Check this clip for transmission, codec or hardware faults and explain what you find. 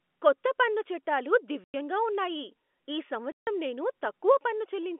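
Two silent dropouts cut through the speech, heard over the narrow telephone band of G.711 coding.

Packet loss filled with silence, 1.64 to 1.74 s and 3.32 to 3.47 s: 100 ms and 150 ms of audio never arrived, and the receiver played digital silence instead. The speech stops dead with hard edges. Both gaps are multiples of 10 ms, which fits 10 ms packets.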